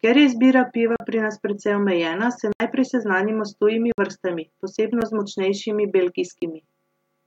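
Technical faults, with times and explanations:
0.96–1.00 s, 2.53–2.60 s, 3.92–3.98 s, 5.01 s, 6.40–6.42 s: block of digital silence. The speech drops to silence five times and snaps straight back with no fade. The 9 ms one at 5.01 s is just a tick. The others last 40, 60 and 20 ms. The 75 ms hole after "nas precej omejena se" is a short hole before "najprej seznanimo s". These are most likely output-buffer underruns.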